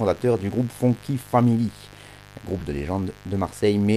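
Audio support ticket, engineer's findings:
Mains buzz, throughout: unshielded or dimmer/rectifier-fed line injecting switching spikes twice per 50 Hz cycle. Result: steady raspy buzz under the speech, harmonics of 50 Hz climbing into the kilohertz range, sitting about 25 dB below the speech level.

Lost LE Audio frames, 2.59 to 2.62 s: radio link dropped a 22.5 ms stretch, consistent with three 7.5 ms frames. LC3 decoder, likely the concealment stage, replayed the last spectrum with randomised signs. Result: brief noisy smear replacing the speech's tonal detail.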